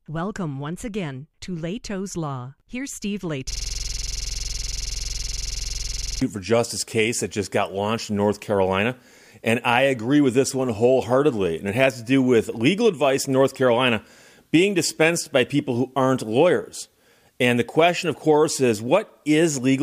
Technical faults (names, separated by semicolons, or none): system hang loop